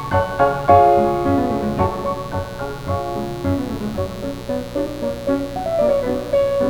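A steady mains buzz runs through the whole clip, sitting only about 15 dB below the sound. Its raspy, edged character, with harmonics of 60 Hz climbing into the kilohertz range, sets it apart from a smooth hum. This points to switching spikes from a dimmer, rectifier or unshielded cable.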